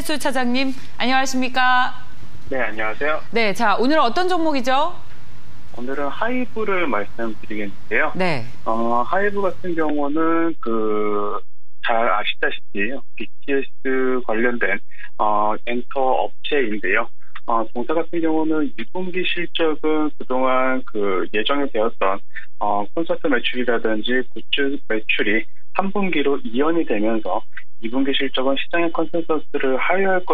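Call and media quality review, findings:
DC offset, whole clip. Nothing audible as such; the problem is a constant shift of the waveform off zero, about -18 dBFS. Steady energy at 0 Hz eats headroom, so clipping comes earlier. Probable component: capture chain, ADC or input stage.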